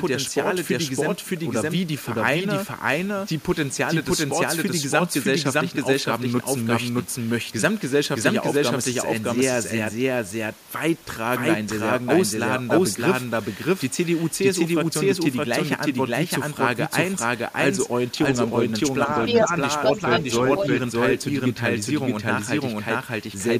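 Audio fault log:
throughout: doubled audio track. A second full-band copy of the speech runs behind the first by roughly 0.7 s, at about the same level. It has no reverb tail or room colour, so it sounds like a clean repeat. The likely cause is a second, slower capture path being mixed in.
19.26–19.44 s, 19.85–20.23 s, 20.57–20.66 s: other side's voice leaking through. A second voice breaks in as short scraps. In the first it is somewhat louder than the speech, and in the later two about equal. This is likely loudspeaker sound the echo canceller failed to remove.
19.45–19.52 s: speech suppressed in double talk. Right after the first leak, the talker's voice dips by a modest amount for well under a tenth of a second. Both sides overlap here, so the echo canceller likely turned down its own talker along with the echo.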